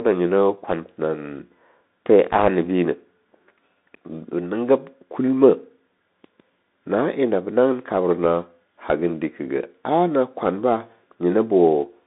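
From start to finish the speech sounds boxed-in and telephone-thin, with a granular hiss under it, scratchy s sounds, and rough, smeared edges on louder passages. Nothing reaches below about 200 Hz or above about 3.7 kHz. This is the Bluetooth CVSD headset codec, which fits a 64 kbit/s one-bit stream: each sample only nudges the signal up or down, and when loud, bright sounds change faster than the adapting step can follow, the waveform is mangled.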